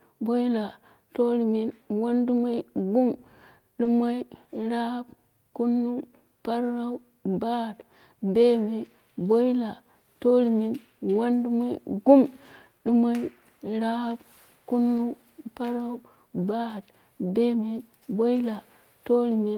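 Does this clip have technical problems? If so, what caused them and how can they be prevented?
Yes. Lost packets rebuilt from error correction occur at 2.37–2.39 s, 3.85–3.87 s, 11.13–11.15 s, 12.87–12.93 s, 14.97–14.99 s (just before "parau bat"), and 18.35–18.37 s. Most patches are 20 ms long, and the one at 12.87 s is 40 ms, which fits two consecutive lost packets. Each time, the next packet carried a low-bitrate backup copy of the missing one, and the decoder played that copy instead of leaving a gap. The speech there sounds briefly rougher and noisier. To prevent this, reduce packet loss on the network path, for example by using a wired connection or prioritising the call traffic, so the backup copies are rarely needed.

Short concealed packet loss affects 3.83–3.87 s. There, 20 ms of audio never arrived, and no backup copy was available for it. The receiver filled the hole by extending the preceding sound, repeating its pitch if it was voiced or shaping noise if it wasn't, then blended back into the real signal. 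The result is a momentary smear or wobble in the speech, right before the rebuilt patch at 3.85 s. To prevent it, fix the underlying loss or add a slightly deeper jitter buffer so late packets still arrive in time to be used.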